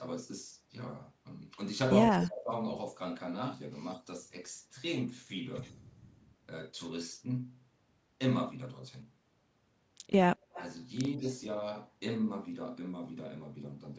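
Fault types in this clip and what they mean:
Speech suppressed in double talk: between 2.08 and 2.52 s the speech dips sharply in pieces, by about 25 dB at its deepest, for around a third of a second in total. This is likely an echo canceller mistaking overlapping talk for loudspeaker echo.
Echo leak: faint delayed copies trail the speech at 3.82, 5.62, 10.53 and 11.22 s. They lag 75 ms in the first two and 183 ms in the last two, and are loudest near 10.5 s at about 20 dB down. This is likely loudspeaker sound an echo canceller missed.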